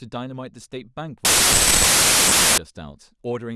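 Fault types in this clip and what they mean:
Wrong sample width: from about 1.25 to 2.58 s the samples are read with the wrong number of bytes each, so most values are stitched together from pieces of neighbouring samples. You get a loud wash of noise with the speech still faintly audible underneath, running about 1.33 times too fast and pitched up to match. That ratio fits packed 24-bit data being read back as 32-bit, since every four bytes read take in four-thirds of a real sample.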